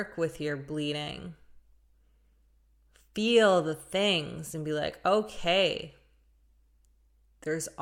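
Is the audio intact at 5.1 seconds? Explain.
Yes, the audio is intact at 5.1 seconds, with no dropout, click, distortion or other fault audible at that point.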